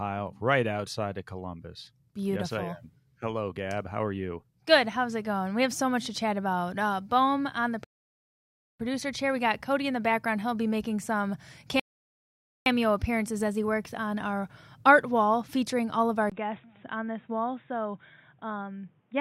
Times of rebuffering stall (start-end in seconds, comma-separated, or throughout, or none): 7.84-8.80, 11.80-12.66